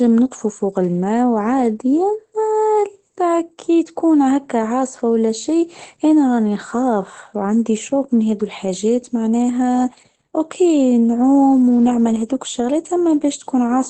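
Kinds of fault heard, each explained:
Opus voice compression: A low-rate linear-prediction voice coder, fitting about 12 kbps, cuts everything above 8.5 kHz, leaving this speech plainly muffled, hoarse and slightly robotic throughout.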